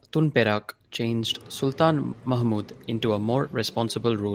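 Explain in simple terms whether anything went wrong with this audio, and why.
Nothing went wrong that I could hear: listening to the speech, no problem stood out at any point.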